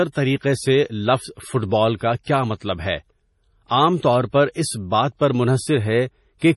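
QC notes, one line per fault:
throughout, MP3 compression: speech likely starved of bits, around 32 kbps; nothing above 11.5 kHz, weak frequency lines dropping in and out, giving heavy watery, swirly smearing.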